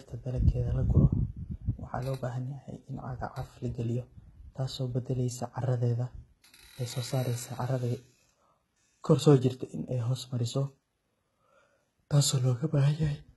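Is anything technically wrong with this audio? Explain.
Yes. Throughout the speech the top end sounds synthetic, which points to HE-AAC compression, likely HE-AAC v2 at a very low bitrate around 16 kbps. Only the lower spectrum is properly coded. The treble is rebuilt by copying lower bands upward under a coarse envelope, so its harmonics don't align with those below the crossover. The damage is heavy: sibilants come out gritty, metallic and lispy, and nothing remains above 11.8 kHz.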